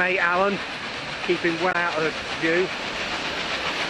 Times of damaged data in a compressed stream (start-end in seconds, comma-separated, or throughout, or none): 1.69-1.76